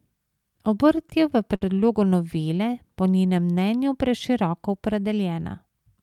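At 1.55 to 1.63 s, between "je v" and "novele po", one sound hangs on unnaturally with a slight buzz or dip. This is a short stall from a late packet: the jitter buffer ran dry, so about 58 ms of the last sound was stretched, with nothing lost and playback resuming 58 ms later.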